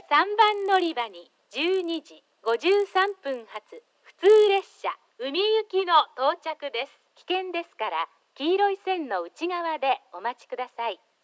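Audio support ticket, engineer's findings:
Resampler restarted on every block, 0.42 to 4.66 s: 50 Hz buzz, present only with signal. Each 20 ms block converted in isolation, so every block edge carries an error. Spectrogram: vertical lines every 20 ms. Waveform: small steps at block joins.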